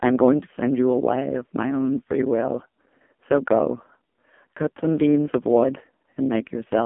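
Speech with heavy AMR narrowband mobile codec damage throughout. The 8 kHz, pulse-driven vocal-tract model leaves a buzzy, synthetic voice, which fits a low mode near 5.9 kbps. A spectrogram shows energy confined to 200 Hz–3.5 kHz, with nothing above 3.6 kHz.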